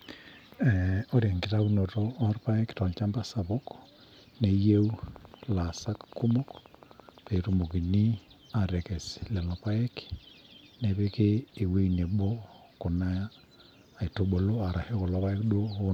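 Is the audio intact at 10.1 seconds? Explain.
Yes, the speech at 10.1 seconds is intact, with no dropout, glitch or other fault at that moment.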